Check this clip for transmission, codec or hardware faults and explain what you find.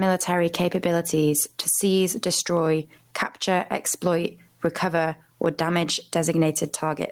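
There is one fault: gain pumping, present throughout the speech. The swing is roughly 15 dB. Loud and quiet passages sit close together in level, so the speech sounds squashed. The likely cause is input gain set far too high, with a fast limiter or compressor pulling the level down on every loud sound and releasing it in the gaps.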